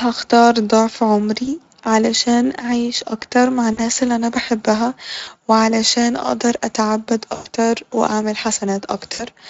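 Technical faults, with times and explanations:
1.45–1.48 s, 3.73–3.80 s, 5.23–5.29 s, 7.35–7.47 s and 9.13–9.25 s: VoIP packet loss concealed by the speech codec. At each gap the Speex decoder lost about 20, 40, 40, 100 and 60 ms of audio and extrapolated from its last pitch and filter, with gain dropping frame by frame. The speech smears into a brief buzzy tone or coloured noise that fades. On a spectrogram, harmonics run flat and unchanging, then dim before fresh detail returns. The waveform shows a repeated periodic cycle that shrinks in amplitude.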